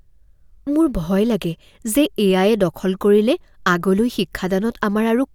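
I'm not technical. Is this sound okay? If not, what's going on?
Yes, nothing stood out as a problem when listening to this recording.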